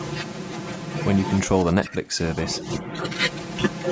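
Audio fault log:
Throughout: channel delay (comb filtering). One channel arrives roughly 5 ms late, and when the two are summed to mono the shared speech cancels at evenly spaced frequencies, starting near 100 Hz, cutting fixed notches that leave the voice hollow and phasey.
1.47 to 2.65 s: speech suppressed in double talk. Within this span the speech dips and breaks up in pieces, about 0.7 s in total, falling by about 25 dB at its deepest, likely because an echo canceller mistook the talker for loudspeaker echo.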